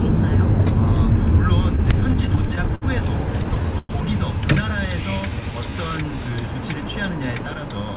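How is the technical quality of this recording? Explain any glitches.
The recording has clear transport glitches: two stretches of stutter and one slowed passage, carried over a narrowband call path whose sound stops at 4 kHz, which fits G.711 A-law coding.

From 1.76 to 2.84 s and again from 3.44 to 3.91 s come repeated stalls (stutter). Packets arrived late, the jitter buffer kept running dry, and the receiver stretched the last sound to bridge each wait. The first span has ten short holds, none longer than 64 ms. The second has four, one lasting 108 ms and partly faded. Nothing is lost, but the sound drags and catches. On a waveform, short segments repeat. A spectrogram shows smeared, frozen bands.

From 4.88 to 6.37 s the jitter buffer slow-down draws the audio out by about 156 ms, to roughly 90% speed at unchanged pitch. The buffer was building a reserve by repeating single pitch periods or slivers of quiet many times in a row, so sounds lengthen and may warble slightly. 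On a spectrogram, features stretch horizontally without shifting in frequency. The waveform shows near-identical cycles copied back to back.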